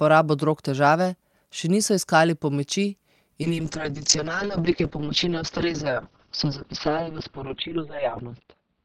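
From 3.43 s to the end, a call bitrate drop from 64 to 6 kbps narrows bandwidth from 20 kHz to 4 kHz: speech turns muffled and watery, spectrogram energy ending sharply at 4 kHz.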